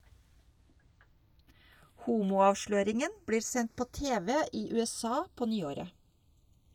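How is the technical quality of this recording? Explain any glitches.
The recording has one glitch, and it runs the whole way through: the channels drift apart. The two sides seem to come from devices on separate clocks, maybe a few tens of parts per million off, so the gap between them creeps up to a fraction of a millisecond. Sum the speech to mono and the comb notches slide slowly, giving a slow flanging swirl.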